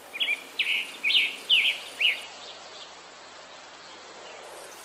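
From 2.24 s to the end, the sound turns rough and muffled, losing everything above 8 kHz: a call bitrate drop from 48 to 10 kbps.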